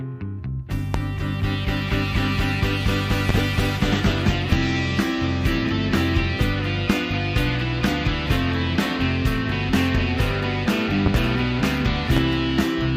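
Loud pops strike at 0.94–0.97, 3.29–3.41 (a double pop), 4.52–4.55, 6.90–6.93, 11.06–11.17 (a double pop) and 12.17–12.19 s, each roughly 15 dB above the sound. They are likely from a voltage spike such as a switch or static. Unlike a dropout click, the sound carries on unbroken beneath each thump.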